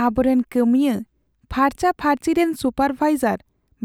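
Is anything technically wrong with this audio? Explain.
No, there's nothing technically wrong with this speech recording.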